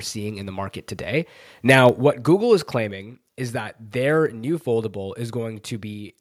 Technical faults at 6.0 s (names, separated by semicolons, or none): none